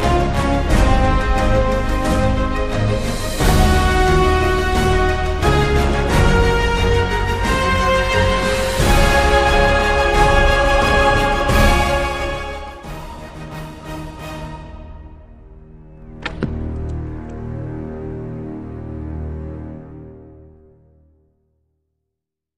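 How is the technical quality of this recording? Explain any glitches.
The recording has two passages of zipper noise during level moves. Zipper noise occurs from 11.61 to 12.96 s, as the level falls by about 20 dB, and again from 15.88 to 16.53 s, as it rises by about 20 dB. Each move is applied in 1 dB jumps, roughly twenty per second, without smoothing between them. Every jump makes a tiny discontinuity in the waveform, so a fast ticking rides on the sound while the level slides.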